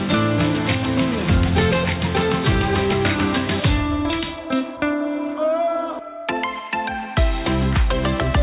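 No technical faults can be heard anywhere in this audio.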